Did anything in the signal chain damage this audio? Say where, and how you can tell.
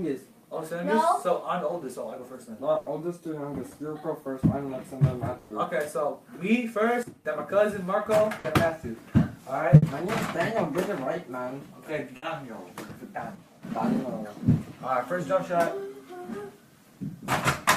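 Yes. Five bursts of packet loss come from the network stage, at 2.77 to 2.89 s, 5.38 to 5.53 s, 8.38 to 8.47 s, 9.76 to 9.85 s and 12.16 to 12.25 s. In each one the last sound is stretched and fades, a held buzz or decaying hiss lasting 60 to 120 ms, and then the audio resumes with 60 to 120 ms of material gone. The gap at 2.77 s also carries a delay shift of about 30 ms. None of these gaps drops to true silence, which separates them from a plain dropout. The concealment is filling the hole rather than leaving it empty.

There are two sudden gain jumps. At 7.03 s the level falls by about 12 dB, and at 13.35 s it falls by about 8 dB. Each lasts a few tenths of a second. The background noise steps down together with the wanted sound, and the change happens instantly with no ramp. An AGC or limiter would ride the level smoothly instead. The cause is likely a gain setting in the call-processing stage being applied from one sample to the next.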